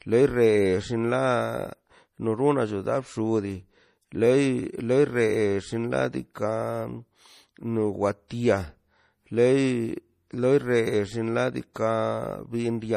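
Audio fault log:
Throughout, MP3 compression: nothing sounds above 15.1 kHz, and the speech carries a plainly audible watery swirl, with chirpy s sounds, likely from a bit-starved encoder (fits roughly 40 kbps). A simple low-pass filter would dull the treble without that swirl.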